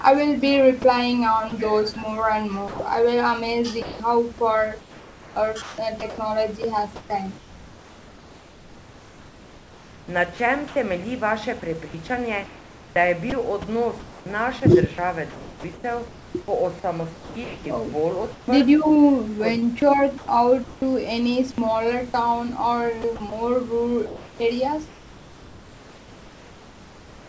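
Speech carried over a call path, band-limited to 8 kHz in a way that fits G.722 at 64 kbps, with room noise about 24 dB below the voice. Sound dropped by the voice detector occurs at 1.50–1.52 s (20 ms), 2.68–2.80 s (120 ms) and 3.82–4.00 s (180 ms), where speech gives way briefly to steady synthetic noise. The likely cause is the sender's detector treating the sound as background and substituting comfort noise. Sound chopped by the voice detector follows at 4.80–10.76 s, 11.88–16.34 s, 17.14–18.48 s, 19.60–20.82 s and 23.02 s to the end. Across these stretches about 3.8 s, 1.6 s, 0.6 s, 0.32 s and 2.8 s respectively are replaced, leaving choppy speech with two or more holes in each stretch. This is likely the detector switching repeatedly between sending and comfort noise.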